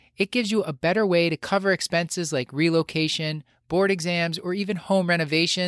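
No technical faults can be heard anywhere in the recording.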